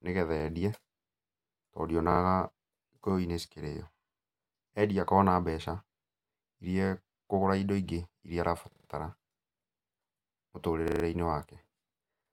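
Four stutters in this speech come from a repeated buffer: new audio didn't reach the device in time, so it replayed the last chunk, and each repeat lasts 40 ms, which fits a 40 ms buffer. At 0.40 s one piece plays twice, at 2.12 s three times, then at 8.72 s, right after "indo ingĩ iria", and at 10.88 s it repeats for 0.16 s. Each join is hard, giving a quick stammer, and essentially nothing is lost.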